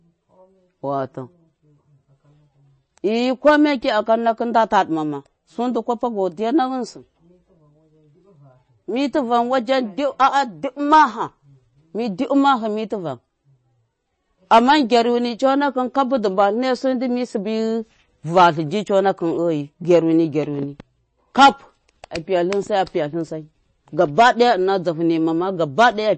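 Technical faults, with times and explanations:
Throughout, MP3 compression: nothing above 8.3 kHz and a plainly watery, swirly edge on the speech, likely from a starved encoder at something like 32 kbps.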